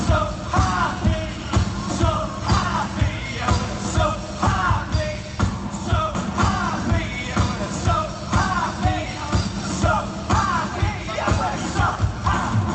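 No technical faults can be heard anywhere in the clip. It has passed through a call path whose codec leaves its usual coding texture and an upper limit of about 8 kHz, consistent with Opus at roughly 32 kbps.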